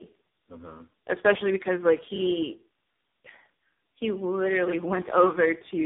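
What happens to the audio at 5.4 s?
At 5.4 s the speech shows tandem speech coding, present across the whole clip: the sound points to three speech codecs in a row, roughly AMR-NB, G.726 and AMR-NB again, each re-encoding the last one's damage. Nothing reaches above 3.8 kHz. Unlike a single low-bitrate codec, the roughness, muffling and warble stack up in layers.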